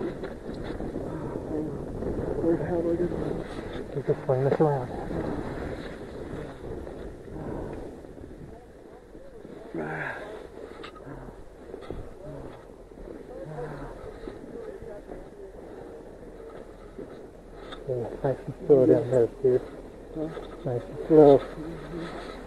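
At 19.13 to 19.16 s a short, sharp blip cuts across the sound, a brief chirp of out-of-place energy peaking at around -15 dBFS that vanishes as quickly as it arrives. This is a corrupt frame decoded: a single compressed frame reached the decoder with damaged bits, and instead of discarding or concealing it, the decoder played it. The misread gains and codes put energy at the wrong frequencies for the roughly 24 ms that frame covers.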